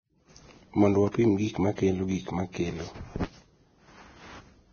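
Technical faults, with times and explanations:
Throughout, Vorbis compression: the speech sounds hissy and grainy, with nothing above 6.5 kHz and blurred consonant attacks. This heavy damage is likely from a Vorbis encoder at a low bitrate of roughly 18 kbps, which quantises the treble so coarsely that fine detail turns to noise.
1.12 to 1.14 s, pre-echo: a short 26 ms hiss comes just before "gik ma kelo gik", softening its onset. The codec spread quantisation noise, sized for the sharp attack, across its whole transform block, so the noise also filled the quiet moment before that attack.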